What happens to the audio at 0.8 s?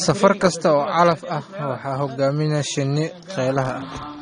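At 0.8 s, as throughout the clip, the speech has likely passed through AAC compression at a low bitrate, consistent with about 32 kbps. The encoder discards spectral detail, leaving nothing above 9.7 kHz. The speech sounds dull and smeared, with a fizzy, warbling texture on sibilants.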